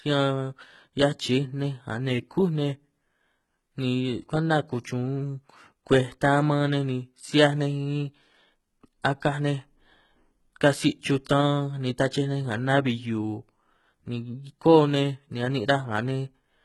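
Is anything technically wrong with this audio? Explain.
Yes. Throughout the speech, the treble above the lower band sounds synthesised and nothing reaches past 11.8 kHz, which points to a very low bitrate near 16 kbps and likely HE-AAC compression. Its band replication copies lower frequencies upward under a coarse envelope, so harmonics misalign and s sounds turn gritty and metallic.

Pre-echo appears at 4.84 s, just after "ni kwenta", and again at 11.25 s. The codec spread quantisation noise across a whole block, so noise sized for a sharp attack leaked into the quiet moment before it. Each attack is preceded by a brief 10 to 16 ms hiss and sounds smeared.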